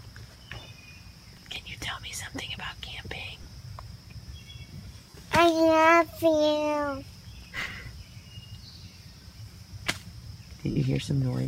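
From 1.33 to 1.56 s the processor falls behind and misses about ten short buffers of around 3 ms each in a row. Each gap is filled with stale audio with hard edges, so the result is processor overload crackle, a gritty tearing laid over the sound.

At 1.86 to 1.88 s Bluetooth LE Audio frames are lost, about 15 ms of them. The LC3 decoder repeats the last spectrum with scrambled phase, so tones blur briefly into a noisy smear. More lost LE Audio frames follow at 3.43 to 3.45 s (22.5 ms) and at 5.10 to 5.15 s (45 ms). The longer gap smears audibly and begins to fade toward silence.

From 7.42 to 7.71 s the processor overload crackle returns. Again roughly ten buffers miss their deadlines and are patched with old audio, giving a second burst of crackle.

A brief 7.5 ms frame loss at 7.86 s leaves a short smear. The longest loss, 52.5 ms at 10.71 to 10.77 s, runs long enough that the concealed sound smears and then decays noticeably toward silence.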